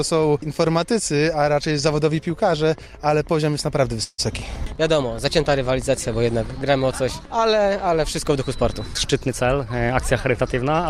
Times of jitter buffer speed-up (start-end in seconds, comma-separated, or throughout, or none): 8.94-10.79